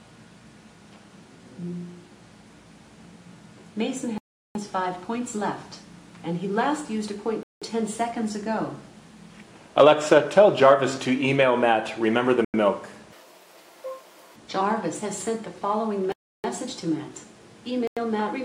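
Five blocks of digital silence cut into the sound: 4.18 to 4.55 s (about 372 ms), 7.43 to 7.62 s (186 ms), 12.45 to 12.54 s (93 ms), 16.12 to 16.44 s (320 ms), and 17.87 to 17.97 s (93 ms). Each time the audio stops dead and comes back without any fade, leaving a clear hole. The lengths, doubling from 93 to 186 to 372 ms, fit whole power-of-two buffers going out empty, either because the program missed its deadline or because a calculation produced invalid numbers.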